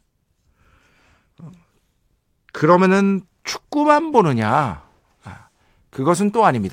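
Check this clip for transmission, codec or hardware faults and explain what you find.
Nothing turned up on a listen here: the speech comes across with no transmission, codec or hardware trouble to point to.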